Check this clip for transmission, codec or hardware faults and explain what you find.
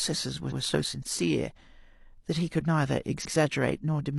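There are repeated frames at two points in this speech clip. At 0.47 s and again at 3.21 s, a block of about 93 ms plays twice. This fits a pair of compressed frames being resent. Each time, the sound stutters briefly, and the clip runs 93 ms longer.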